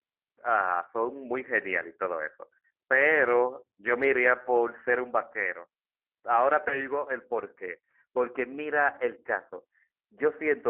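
Throughout, the speech carries the sound of a G.729 codec, consistent with an 8 kbit/s stream. Each 10 ms frame is rebuilt from a vocal tract filter, pitch predictor and a few pulses, leaving a band of roughly 300 Hz to 3.4 kHz and a plainly rough, synthetic texture.

From 6.68 to 6.88 s there is VoIP packet loss concealed by the speech codec. About 20 ms of audio, consistent with a single lost packet, was filled by extrapolating the last pitch and filter at falling gain. This gives a brief stretched, fading smear, and the voice stays weakened until about 6.88 s.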